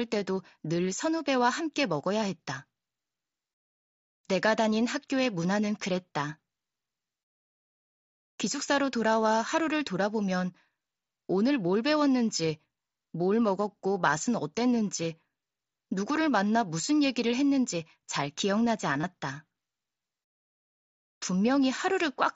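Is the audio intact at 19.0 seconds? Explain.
No. Concealed Bluetooth headset packet loss occurs from 19.01 to 19.03 s. For about 22.5 ms, packets from the headset never reached the phone. That gap fits three lost 7.5 ms mSBC frames. The receiver filled it by repeating the best-matching stretch of the preceding waveform. The result is a brief buzzy, held tone at full level. A slight warble follows as real audio resumes. Around it, the wideband mSBC headset codec carries the sound.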